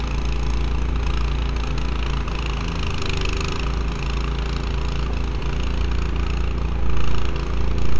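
A recording of sounds with no audible technical faults in the signal.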